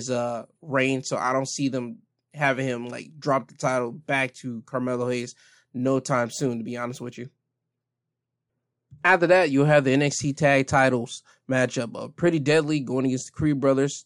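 From 6.11 to 9.42 s, just before "you'll have the", the speech shows imaging from linear upsampling. The sound appears to have been raised from 24 kHz to 44.1 kHz by straight-line interpolation, leaving a dulled top end and a faint mirrored band from 12 to 24 kHz, roughly 40 dB down, heard as light metallic shimmer on sibilants.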